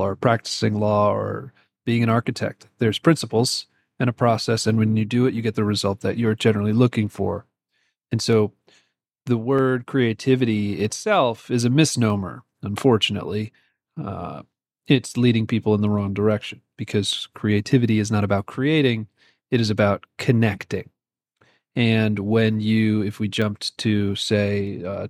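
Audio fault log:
0.79–24.67 s, clock drift buffer slips: a regular click every 1.26 s, about twenty in all, likely from two device clocks disagreeing by roughly 150 ppm, forcing a few samples dropped or repeated.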